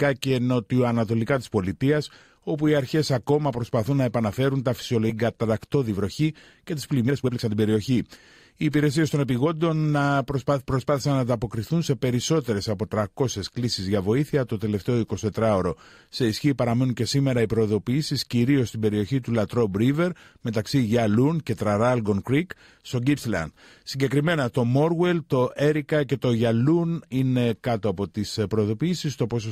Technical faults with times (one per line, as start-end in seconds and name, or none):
5.09-5.11 skip ahead
5.27-6.21 jitter buffer speed-up
6.62-7.97 jitter buffer speed-up
8.64-9.47 jitter buffer speed-up